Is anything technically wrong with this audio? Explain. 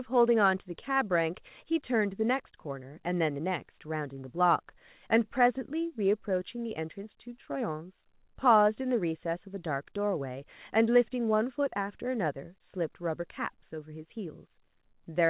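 No, nothing is wrong: the speech has come through a narrowband call path, likely a G.711-style codec, and the empty band above 4 kHz is that path's normal limit rather than a fault.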